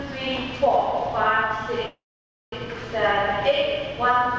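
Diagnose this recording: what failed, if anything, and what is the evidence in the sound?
At 1.86 s the sound smears into a brief fading buzz, then near-silence until 2.53 s, resuming intact. This is a call audio freeze, likely from delayed network packets emptying the jitter buffer.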